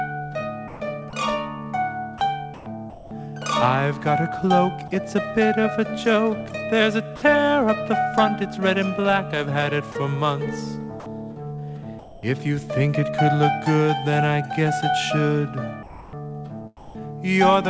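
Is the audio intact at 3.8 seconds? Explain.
Yes, the audio is intact at 3.8 seconds, with nothing there beyond the ordinary sound of the call path it travelled through.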